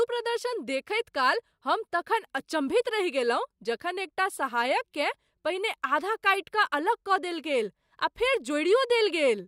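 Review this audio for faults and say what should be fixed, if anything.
No faults found in the speech recording; nothing needs fixing.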